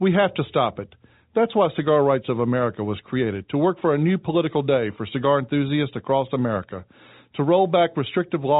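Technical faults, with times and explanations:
Nothing stood out on listening to this speech, which carries the expected narrow band of G.711 telephone coding with nothing above 3.8 kHz.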